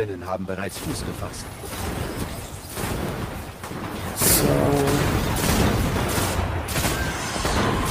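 Nothing goes wrong anywhere in the clip, with no dropouts, clicks, glitches or other faults to be heard at any point.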